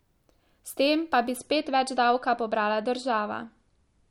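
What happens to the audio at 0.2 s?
At 0.2 s the speech plays through intact, with no dropout, click, distortion or other fault at that moment.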